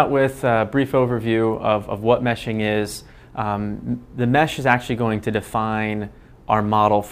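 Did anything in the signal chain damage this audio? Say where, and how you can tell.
No, nothing in the signal chain has left an audible mark on this audio. No stage between capture and playback shows itself in the sound, so there is nothing to trace back to a point in the path.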